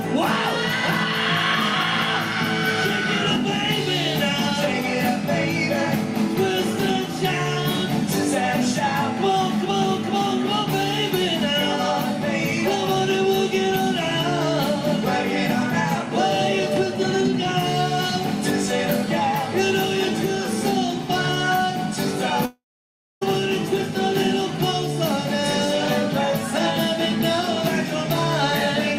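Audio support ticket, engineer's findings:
Long network dropout, 22.45 to 23.23 s. Likely an interruption on the network path, with about 0.76 s of audio never arriving. Concealment stretches the last sound into a fading buzz, then about 0.6 s of silence. Audio resumes with the lost stretch gone.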